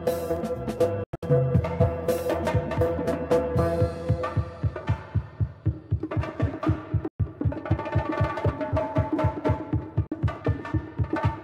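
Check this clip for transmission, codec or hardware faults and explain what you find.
The clip has three gaps, likely a Bluetooth dropout: late wireless packets were discarded, so the sound cuts to silence and resumes further on, as if it had played through. From 1.04 to 1.23 s about 160 ms drop out in several holes, the longest 93 ms. About 116 ms drop out from 7.08 to 7.20 s, and a 46 ms gap from 10.07 to 10.12 s.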